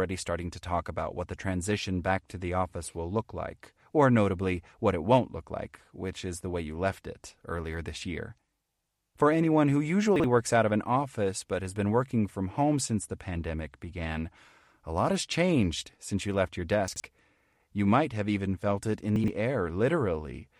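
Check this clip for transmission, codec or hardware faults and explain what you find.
One transmission fault recurs three times: chunks out of order, at 10.16 to 10.24 s, 16.88 to 17.0 s and 19.16 to 19.28 s. A 40 ms chunk of audio arrived late and played one chunk behind in the first case and two behind in the others. Nothing is lost, but the speech briefly jumbles at the hard joins.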